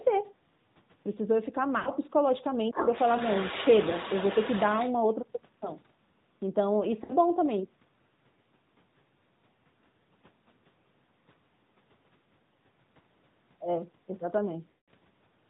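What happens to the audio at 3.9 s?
At 3.90 to 3.94 s, radio errors corrupted one AMR speech frame, so its checksum failed and the decoder discarded it. To cover the gap it reused the last good pitch and vocal tract settings at reduced gain for those 20 ms. The result is a brief dip or warble in the sound. Because only a single frame is lost, the audio does not stretch out or fade to silence, but it returns weak or rough for an instant.

The drop falls inside a longer stretch, from 2.71 to 4.94 s, where the other side's voice leaks through. The likely cause is that the talker's device played the far end on a loudspeaker and its echo canceller left part of that signal in the microphone feed. A second voice can be heard behind the main one, roughly 10 dB quieter.

Around this moment the AMR narrowband mobile codec is also at work, as it is for the whole clip. It carries the audio at 10.2 kbps with 8 kHz sampling, so nothing above 4 kHz survives. 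Its vocal tract model is driven by a few pulses per 5 ms subframe, and that leaves a plainly audible buzzy, synthetic colouring on everything, including the leaked second voice.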